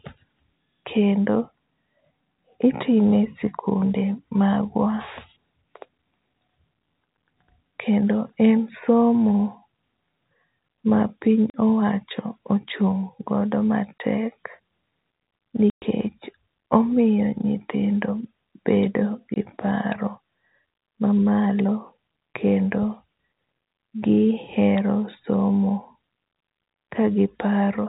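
At 11.50 to 11.54 s, 13.98 to 14.00 s, 15.70 to 15.82 s and 19.34 to 19.36 s, packet loss filled with silence cuts holes of 40, 20, 120 and 20 ms, all multiples that fit 20 ms packets. Unlike concealment, which would smear, these gaps are dead silent with hard edges inside the 4 kHz telephone-band G.711 sound.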